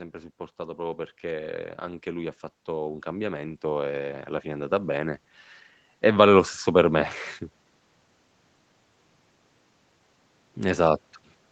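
Speech recorded through a call's microphone processing, with nothing above 8 kHz. From 0.12 s to 5.37 s there is automatic gain rising. The gain control judged the input too quiet. It lifted the level gradually, by about 10 dB. Voice and background noise swell together.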